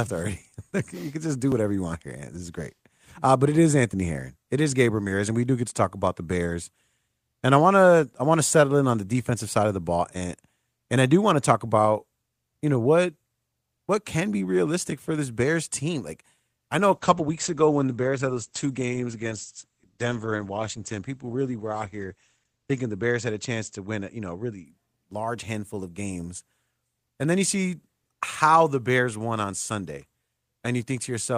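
From 16.93 s, after "I know a", a call bitrate drop sets in, lasting until 24.71 s, just before "large handful of games". High frequencies above about 8 kHz vanish and coarser coding makes the speech muffled and rough for roughly six seconds, consistent with the rate falling from about 32 to 12 kbps.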